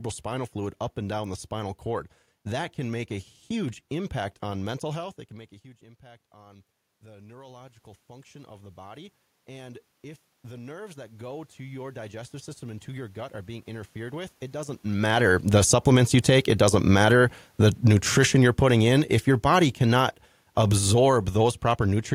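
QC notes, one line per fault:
6.01–14.81 s, automatic gain rising: just after "can make a huge", the input falls by about 22 dB as the talker moves away from the microphone around 5 s. The gain control reads this as too quiet and slowly raises its gain by about 17 dB over nearly nine seconds. The voice creeps back up, and the room noise swells with it, because the control amplifies everything reaching the microphone.
14.99–20.19 s, automatic gain falling: the talker moves again around 14.5 s while the raised gain is still in place, so the sound arrives too loud. The control reacts by easing its gain down by about 8 dB over roughly five seconds. The voice starts hot and then gradually sinks, and the background noise sinks with it, which marks this as a gain change rather than the talker moving again.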